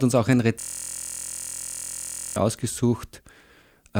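Right after "uns auch ein", from 0.60 to 2.36 s, the speech freezes into a steady, droning buzz at about 43 Hz. This is a system hang loop: the computer or audio driver stalled while the sound hardware kept replaying the same 23.22 ms stretch of its ring buffer, roughly 76 times in a row. The loop length fits a 1024-sample buffer, and its exact repetition is what turns the frozen fragment into a tone.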